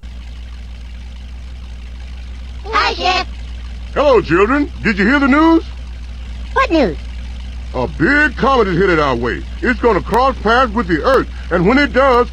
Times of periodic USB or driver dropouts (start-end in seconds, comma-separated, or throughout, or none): 10.14-12.14